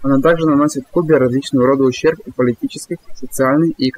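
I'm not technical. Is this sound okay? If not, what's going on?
No. This speech has overdone noise removal from start to finish. A cleanup tool meant to take out background noise was set far too strong. It switches off any slice of the sound that looks like noise to it. Quiet parts of the voice get caught and removed too. So the background drops away and breaks up into small twinkling, warbling specks.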